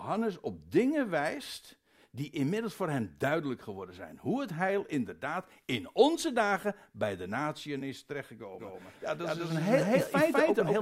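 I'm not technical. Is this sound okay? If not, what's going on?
No. From 8.59 s, right after "bij de natieën is", the likely cause is a second copy of the audio mixed in: a doubled audio track, trailing about a fifth of a second behind at equal loudness until the end.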